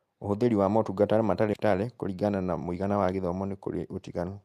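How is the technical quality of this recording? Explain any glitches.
Two glitches stand out.

At about 1.53 to 1.55 s there's a skip ahead: roughly 0.7 s of speech was dropped, so playback jumps forward and the two sides butt together with no gap.

From 1.65 to 3.29 s there's a jitter buffer speed-up. The buffer was overfull, so short pitch-period chunks got trimmed repeatedly, around a fifth of a second in total. The speech runs about 14% fast at normal pitch and sounds hurried.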